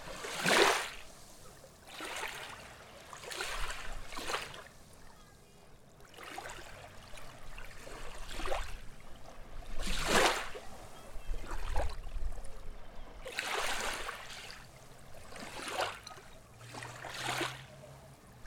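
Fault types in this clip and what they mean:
No faults can be heard anywhere in this recording.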